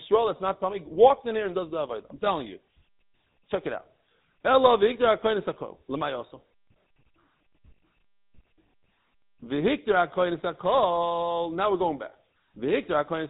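From start to finish the speech carries GSM full-rate codec damage, plainly audible: the excitation is rebuilt from sparse regular pulses, giving a buzzy, gravelly roughness consistent with a 13 kbps stream. Plain band-limiting to 3.8 kHz would sound muffled but smooth, without this grit.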